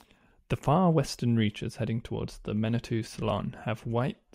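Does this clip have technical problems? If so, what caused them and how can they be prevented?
No, nothing in this clip stood out as a technical problem on listening, so there is nothing to trace back or prevent.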